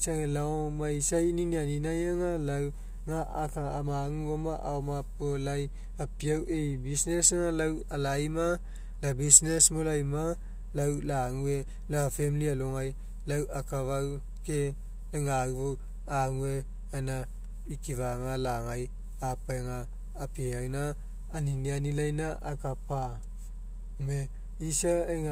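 No technical faults turn up anywhere in the speech recording. There is nothing in it that calls for a timestamp.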